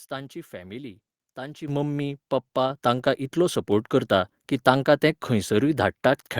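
At 1.68 s, right after "तांची फॅमिली ताची", the microphone volume stepped up by about 9 dB, then by about 4 dB at 2.7 s and about 2 dB at 3.72 s. Each is an instant step, not a gradual ramp, and voice and background jump together.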